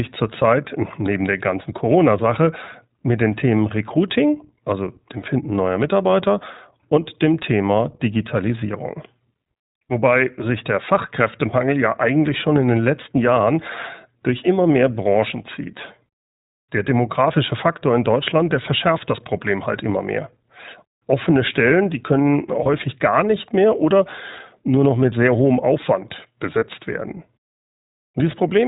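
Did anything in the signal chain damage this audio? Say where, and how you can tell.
Yes. At the codec stage, the iLBC codec is plainly audible throughout the speech: nothing above 4 kHz, and a rough, synthetic edge that fits 15.2 kbps iLBC with 20 ms frames.

Lost iLBC frames, a network fault, show up at 22.64 s and 26.58 s. The decoder fills each gap with a repeated, buzzy pitch cycle, then the voice snaps back straight away.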